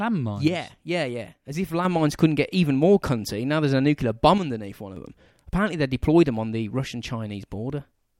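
From 0.48 to 1.85 s, and again from 4.38 to 4.96 s, the speech drops abruptly by about 6 dB and comes back just as suddenly. This is most likely one channel dropping out, so the mono sum carries only half the shared signal. Unlike a fader dip or compressor pumping, the level doesn't ramp or breathe. It holds at a flat, exact half-level step for the whole gap.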